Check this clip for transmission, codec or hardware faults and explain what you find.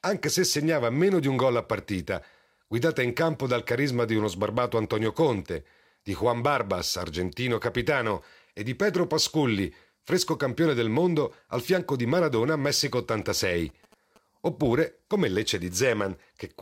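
One hardware fault is present. GSM signalling bursts appear from 13.22 to 14.18 s. A nearby 2G phone's radio bursts are rectified by the circuit. They produce faint galloping ticks and 217 Hz buzzing, roughly 30 dB below the speech.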